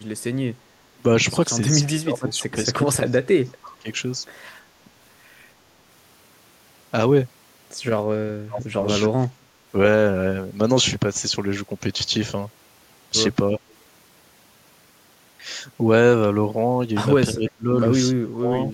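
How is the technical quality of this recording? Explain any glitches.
The recording has two call-processing problems: the voice keeps getting ducked, and there's a brief faint echo.

Speech suppressed in double talk shows up at 1.86–3.88, 8.45–8.81, 9.16–9.73, 13.51–13.61, 17.33–17.69 and 18.13–18.52 s. The voice sinks by roughly 25–30 dB, except for a mild dip of about 5 dB at 13.5 s. The likely cause is an echo canceller that, with both ends talking, squashed everything.

There's an echo leak from 3.63 to 4.0 s, a quiet delayed copy of the voice trailing 324 ms behind and sitting about 25 dB down. It's likely the far end's canceller on a speakerphone letting some loudspeaker pickup slip back down the line.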